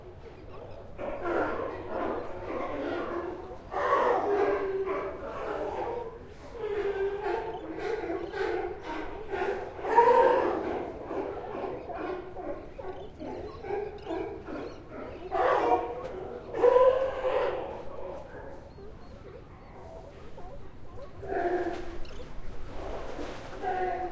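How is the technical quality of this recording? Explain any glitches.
The technical quality of this recording is good, with no glitches to explain.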